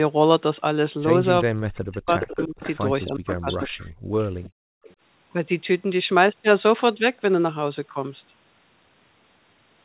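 Speech over a call path, band-limited to about 4 kHz. From 1.44 to 2.63 s and 3.05 to 3.70 s the speech dips by up to about 40 dB, likely speech suppressed in double talk. A delayed copy, about 413 ms late, sounds from 2.22 to 3.84 s, 4.20 to 4.50 s and 4.84 to 4.95 s, likely echo leak. The background drops out from 3.98 to 4.15 s and 4.50 to 4.84 s, by about 39 dB and 36 dB. This is background gated by the echo canceller.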